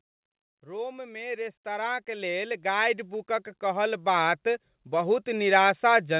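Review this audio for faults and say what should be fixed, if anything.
Automatic gain rising runs from 0.64 s to 5.54 s. The gain control judged the input too quiet and kept turning it up, by about 18 dB overall. The speech and background swell together. Set a proper input level so the control starts near its target.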